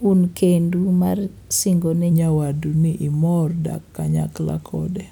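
A speech recording, with a section at the wrong speed from 2.12 s to the end at 5.12 s. At 2.12 s the playback suddenly drops to 0.886 times the original rate. Speed and pitch fall together. The voice turns slower and deeper, about two semitones lower, and stays that way to the end. The likely cause is that this part was played or resampled against the wrong clock rate, stretching it out.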